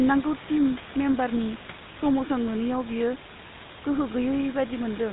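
Speech, with a buzzy, gravelly roughness throughout and nothing above 4 kHz, which fits the 13 kbps GSM full-rate codec. Its pulse-driven, coarsely sampled excitation sets it apart from plain band-limiting. The room noise sits about 14 dB below the speech.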